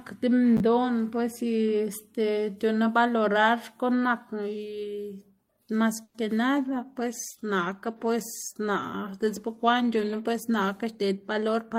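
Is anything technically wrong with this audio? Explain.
Yes. There are three faults. From 6.03 to 6.16 s a call audio freeze fills about 110 ms, likely from delayed packets draining the jitter buffer. A fading buzz or hiss covers the gap before the speech resumes unbroken.

Right after "mas que", at 6.59 s, a call bitrate drop takes the encoder from 40 to 18 kbps, bottoming for 3.7 s. The speech turns coarse through to the end.

From 11.02 to 11.74 s a jitter buffer speed-up trims short pitch-period pieces, removing about 70 ms. The speech runs at 108% speed at unchanged pitch and sounds hurried.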